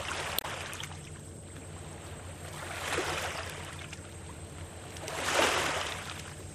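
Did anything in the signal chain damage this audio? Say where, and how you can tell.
Yes. A brief disturbance from 0.35 to 0.45 s is damaged data in a compressed stream: the decoder misread corrupted frames, lost sync and resumed at the next frame.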